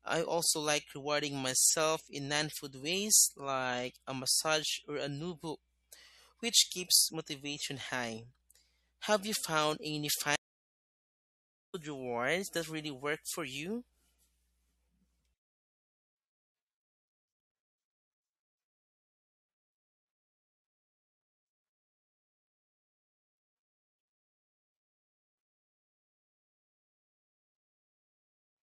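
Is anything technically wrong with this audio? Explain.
Yes, there are two faults.

MP3 compression artefacts run through the whole speech clip, likely from MP3 encoding at a low bitrate, consistent with around 64 kbps. Starved of bits, the encoder cuts the treble and drops weak spectral detail that flickers between frames, giving a watery, swirly texture, metallic s sounds and smeared attacks.

A stream reconnect occurs from 10.36 to 11.75 s. After "you found any", the link dropped and the audio falls silent for 1.37 s. A fresh decoder then picks up mid-stream at "rewards that really work", skipping roughly 0.7 s of material, with a brief muted or faded start.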